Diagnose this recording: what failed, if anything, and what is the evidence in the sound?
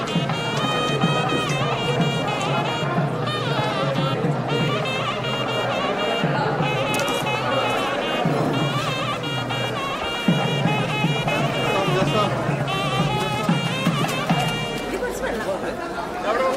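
Nothing failed in this recording, and the sound gives no evidence of any fault.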